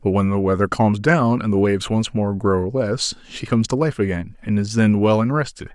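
No technical faults are audible anywhere in the speech recording.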